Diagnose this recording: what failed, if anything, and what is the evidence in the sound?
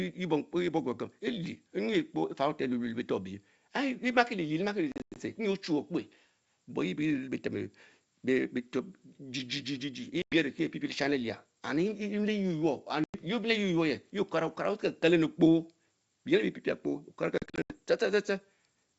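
Network packet loss on an ADPCM call, a G.722 link running at 64 kbit/s. Hard-edged silent gaps fall at 4.92–5.20 s, 10.22–10.36 s, 13.04–13.15 s and 17.38–17.74 s. Dropped packets were zero-filled. The decoder's predictor and step size then lost sync with the sender's.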